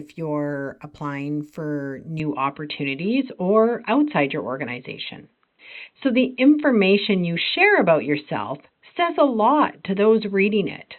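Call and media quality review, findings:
Input likely switched to a poorer device at 2.2 s, right after "you're applying for", persisting to end. Band capped near 4 kHz: dull, boxy. Level shifts by about 5 dB, faint new noise floor, no gap at switch.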